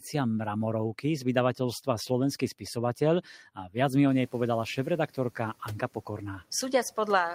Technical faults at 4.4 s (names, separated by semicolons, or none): noise suppressor catching up